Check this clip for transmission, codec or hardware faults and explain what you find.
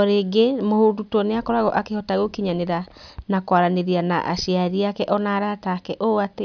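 No faults detected in this clip.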